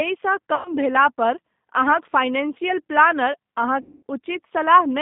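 Throughout, the speech carries the G.729 codec's sound, and the damage is plainly audible. The band runs from about 150 Hz to 3.7 kHz, so nothing bright survives. The voice is rebuilt from a vocal tract filter, a pitch predictor and a few pulses per frame. That gives it a rough, slightly synthetic edge. The rasp points to an 8 kbit/s G.729A stream.

From 0.55 to 0.74 s, just before "भेलापर अहाँक फाइनेंशियल प्लानर", there is VoIP packet loss concealed by the speech codec. About 100 ms of audio went missing, which fits five lost packets. The decoder stretched its last pitch and filter and lowered the gain each frame. The speech comes back weak and smeared.

From 3.81 to 4.03 s, right after "भेलापर अहाँक फाइनेंशियल प्लानर", a longer loss hits. About 220 ms is gone, which points to eleven lost packets. The concealment stretches the last sound, then fades. Because each frame builds on the last, the voice stays distorted briefly after packets resume.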